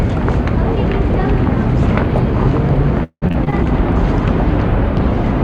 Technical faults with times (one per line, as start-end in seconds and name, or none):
3.03-3.54 repeated packet loss (robotic sound)
3.87-5.44 call bitrate drop